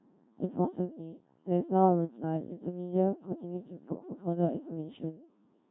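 From the first syllable to the end, the speech has gone through a Codec 2 vocoder, and heavily. None of the original waveform survives. The decoder rebuilds the voice from sine waves driven by pitch, voicing, energy and a rough spectral envelope, so what you hear is robotic and buzzy, with a synthetic edge. The thin, coarse detail points to one of the lowest modes, around 1.3 kbit/s.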